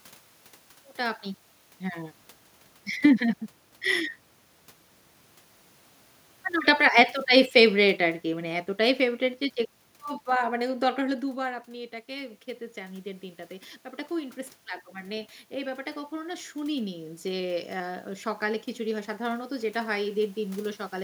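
Automatic gain rising, 11.37 to 18.05 s: the input fell about 12 dB, so the gain control slowly added about 8 dB, swelling voice and room noise together.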